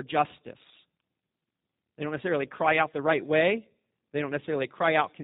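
From start to finish the speech carries the sound of a G.729 codec, and the damage is plainly audible. The codec throws away everything above 4 kHz, so the top end sounds dull and boxed in. It rebuilds each short frame from a vocal-tract model plus a handful of pulses, which gives voiced sounds a rough, slightly buzzy, synthetic edge. That's the sort of sound you'd expect from an 8 kbit/s VoIP link.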